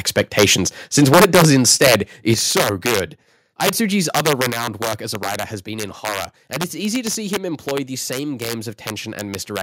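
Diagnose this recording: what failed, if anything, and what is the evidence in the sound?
Integer overflow runs through the whole clip, a fault at the sample-format conversion stage. The signal is driven about 7 dB past full scale, and instead of being limited, each sample beyond the integer maximum wraps to the opposite sign. Only a small fraction of samples, under one percent, cross the limit, but each one jumps across the full range. The result is violent, sharp cracks on loud peaks. Clipping merely flattens peaks, so it gives a harsh buzz rather than these snapping cracks.

Microphone overload is heard from 0.17 to 0.54 s, from 0.97 to 1.96 s, and briefly from 2.30 to 2.32 s just before "so good". This is likely a clipping analogue-to-digital converter fed by too much microphone gain. The tops of the loudest syllables are squared off about 7 dB over the limit in the first two spans and about 1 dB in the last. 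It sounds like a crackling, gritty edge rather than the sign-flipping cracks of overflow, and it is densest in the second span.

The microphone volume is stepped down at 1.14 s, at 2.34 s just before "so good", and at 4.50 s just before "work as a writer". Level drops abruptly by about 3 dB, about 8 dB and about 4 dB respectively, with background dropping along with the voice. The likely cause is call processing reacting to the distorted peaks by lowering the device input gain in a single step. That accounts for the drop at 2.34 s following overload, and a step rather than a smooth fade rules out ordinary compression.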